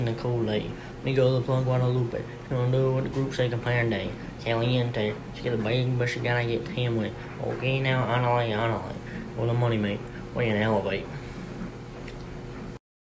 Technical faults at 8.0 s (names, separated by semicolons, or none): none